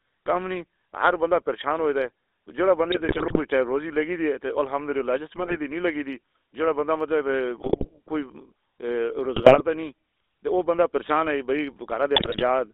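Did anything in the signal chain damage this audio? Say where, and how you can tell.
Yes. Throughout, the speech has a buzzy, gravelly roughness, and its band runs only from about 300 Hz to 3.6 kHz, with nothing above. That roughness is the GSM full-rate codec at the codec stage. It models the vocal tract and drives it with a coarse, regularly spaced pulse excitation that keeps only part of the waveform. The fine detail is replaced by a pulsed buzz, which fits the 13 kbps full-rate coder.

At the network stage, five short bursts of squawking, popping and gargling break into the speech: 2.92–3.39 s, 5.36–5.56 s, 7.60–7.89 s, 9.36–9.61 s (just before "تو نہیں") and 12.16–12.43 s (just after "پریشان ہے بھائی"). These are GSM bit errors. Corrupted bits reached the decoder and scrambled its filter, pitch and gain values, so frames came out with bent spectra or sudden level jumps. The density of damage points to an error rate of a few percent.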